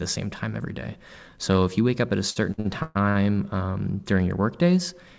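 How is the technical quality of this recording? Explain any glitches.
The recording has one clear glitch: a burst of stuttering in the middle, heard over a call path whose band stops at 8 kHz, which fits G.722 at 64 kbps.

From 2.30 to 3.17 s, between "wake up at a" and "um during your", there are repeated stalls (stutter). Packets arrived late, so the jitter buffer ran dry five times, and the receiver stretched the last sound to fill each gap, up to 125 ms. Nothing is lost, but about 40% of that stretch is filler, so the speech drags and hiccups.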